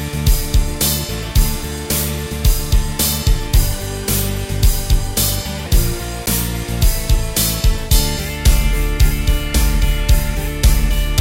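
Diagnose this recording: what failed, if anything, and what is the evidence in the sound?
There's a block of digital silence at 6.26 s, and it points to the driver or buffer stage. The sound drops straight to silence for about 10 ms and comes straight back with no fade, and the whole thing lands as a short tick. A 10 ms hole suggests one output buffer that the program didn't fill in time and that got played out as zeros.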